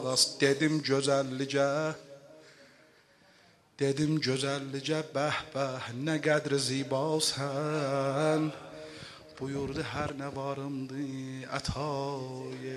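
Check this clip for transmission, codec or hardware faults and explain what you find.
No transmission, codec or hardware faults can be heard anywhere in the clip, and the signal stays steady and intact throughout.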